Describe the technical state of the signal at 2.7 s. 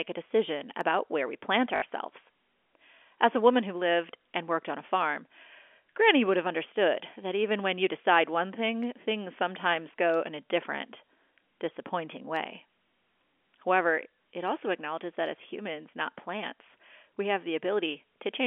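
At 2.7 s the audio is intact, with no fault present, the speech simply carrying the narrow telephone band of G.711 coding, roughly 300 Hz to 3.4 kHz.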